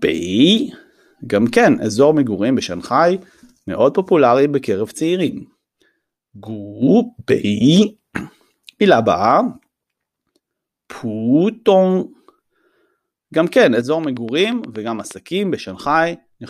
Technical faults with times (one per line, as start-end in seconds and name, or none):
14.04-15.12 train of clicks